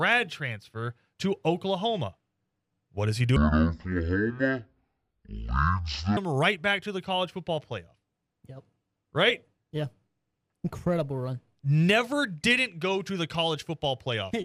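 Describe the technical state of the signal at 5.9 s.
At 5.9 s the signal is inside a stereo read as mono fault running from 3.36 to 6.17 s, between "does he" and "right back to the". Interleaved left and right samples are played in sequence as one channel, so speech runs at half speed and an octave low. A faint mirrored copy in the upper spectrum sets it apart from a simple resampling slowdown.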